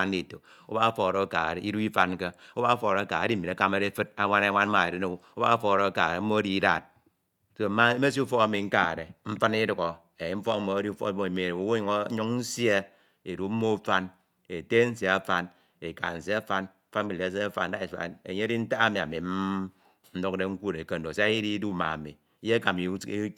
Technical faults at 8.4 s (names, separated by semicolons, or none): none